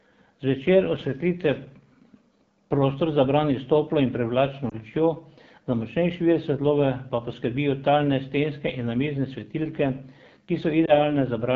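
AMR wideband (HD Voice) codec throughout: at 8.85 kbit/s, one of its lowest rates, the model-based coding leaves this speech plainly rough and raspy.

Lost AMR speech frames at 4.70 to 4.75 s, between "s toplo in privlačno" and "lučjo za močnejši vir", and again at 10.86 to 11.12 s. Each time a failed 20 ms frame was concealed by repeating the previous settings at falling gain, causing a brief dip or warble.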